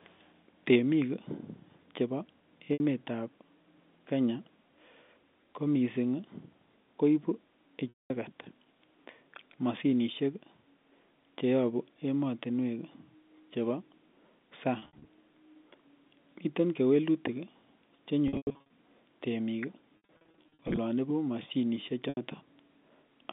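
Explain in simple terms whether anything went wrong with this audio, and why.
Packet loss with pitch repetition at 2.73, 7.89, 14.79, 18.28, 19.97 and 22.09 s: bits of speech went missing, and the receiver patched each gap by repeating the last sound, heard as buzzy holds or brief fades.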